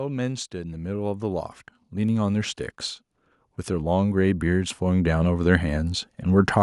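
From 0.54 to 2.66 s, and again from 3.66 to 6.18 s, automatic gain rising lifts the level by about 9 dB and then about 10 dB. The gain control judged the input too quiet and ramped up, so speech and background noise swell together.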